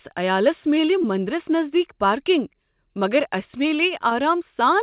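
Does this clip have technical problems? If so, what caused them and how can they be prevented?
Yes. Two brief smears interrupt the speech, one at 1.02 to 1.06 s and another at 4.10 to 4.13 s, each a short wobble where the sound briefly loses its definition. These are short concealed packet loss: about 20 ms of audio failed to arrive at the decoder in time on each occasion, and the receiver covered the gap by extending the preceding sound, then faded back into the real signal. The call path's narrow band, with nothing above 4 kHz, is normal for its G.711-style codec. Preventing this means a more stable network connection or a larger jitter buffer, so packets arrive before they are needed.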